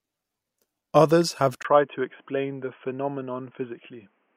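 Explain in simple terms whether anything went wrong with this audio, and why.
At 1.63 s the speech suddenly turns dull and boxy, after a tiny gap of about 20 ms, and stays that way to the end, with nothing above about 3.3 kHz and a faint new background hiss. This is likely an input switched to a poorer device, such as another microphone.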